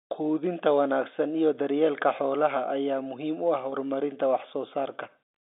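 At 3.70 s there's packet loss with pitch repetition: a 20 ms gap, consistent with a single dropped packet, papered over by repeating the last pitch period, so it comes out as a brief, slightly buzzy held sound.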